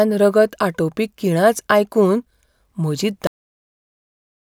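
Speech recording with a cut-off end: at 3.27 s the audio stops abruptly mid-sound and drops straight to digital silence with no decay, which holds to the end of the file. The final buffers were never written or played back, truncating the recording.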